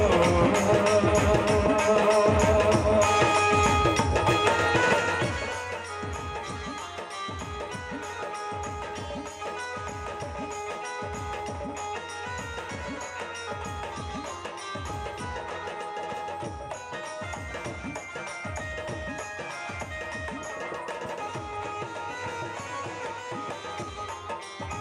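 No technical faults are audible.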